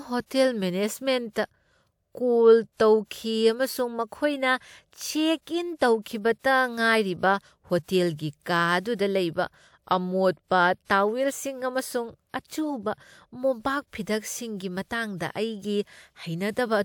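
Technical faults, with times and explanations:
5.42–5.47, 6.39–6.44, 7.83–7.88, 8.80–8.85, 10.85–10.90 s: pre-echo. A short hiss of about 50–57 ms comes before each sharp speech onset because transform-block quantisation noise spreads backwards. Unlike ordinary echo, it leads the attack rather than trailing it.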